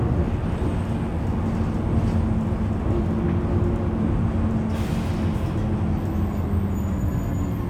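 A steady, raspy mains buzz sits underneath these everyday sounds from start to finish, roughly 30 dB below the main sound but never letting up. The buzz is built on 50 Hz, with sharp switching spikes twice per cycle filling in a dense ladder of harmonics that reaches several kHz. That edge points to a dimmer, a rectifier or a poorly shielded cable coupling interference from the power line into the signal path.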